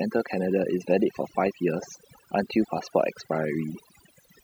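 Throughout, overdone noise removal has gated quiet frequency bands away with the noise. The background drops and breaks up into twinkling specks.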